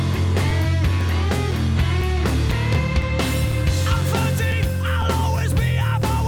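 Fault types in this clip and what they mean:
Periodic USB or driver dropouts, 0.51 to 6.02 s: every 0.5 s something briefly blocks the USB bus or audio driver, so a few milliseconds of audio go missing and are replaced by silence, leaving a steady train of ticks across that span.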